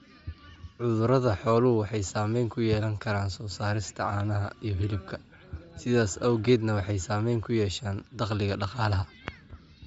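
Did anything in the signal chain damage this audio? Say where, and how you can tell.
Yes, at the codec stage, across the whole speech clip. The speech has a grainy, breathy edge, and a spectrogram shows a flat ceiling near 7.7 kHz with noisy, smeared texture beneath it. This likely comes from Bluetooth LC3 compression at a low rate, consistent with about 32 kbps and 10 ms frames.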